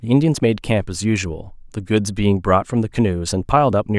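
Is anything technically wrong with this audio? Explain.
No, nothing technically wrong can be heard in this speech recording.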